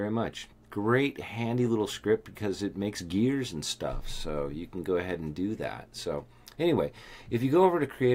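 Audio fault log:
No fault can be heard anywhere in this clip. There is nothing here to log.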